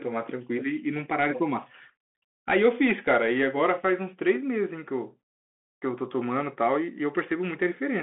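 Speech, passed throughout through a Bluetooth CVSD headset codec, consistent with a 64 kbps one-bit link: nothing above 3.8 kHz survives, sibilants turn scratchy and granular hiss sits beneath.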